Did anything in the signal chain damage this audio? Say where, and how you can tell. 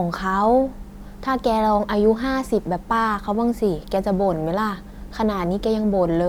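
No, nothing along the chain has left a mark I can hear on this speech; every stage from capture to playback seems to have passed it along without trouble.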